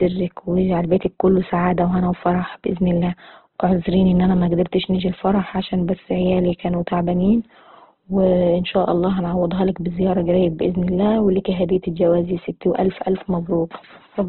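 Speech throughout, band-limited with nothing above 4.2 kHz and rough, grainy, noise-filled tone, likely from Opus compression in CELT mode at a rate consistent with about 12 kbps.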